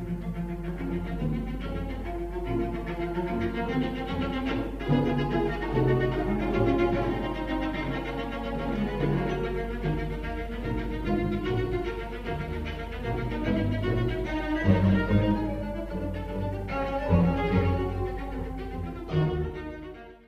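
No technical faults can be heard anywhere in the recording; the signal stays continuous and steady throughout.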